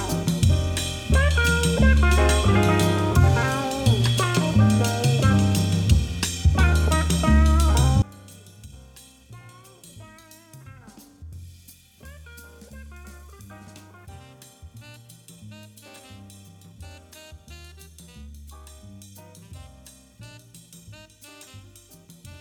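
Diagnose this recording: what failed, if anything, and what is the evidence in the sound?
A polarity reversal on one stereo channel, likely from a miswired balanced lead in the analogue wiring, is the fault here: one channel inverted. From 8.02 s to the end at 22.40 s, the summed signal drops by about 25 dB as everything common to both channels cancels. Centred material and low end all but disappear, leaving only a faint residue made of whatever differs between left and right.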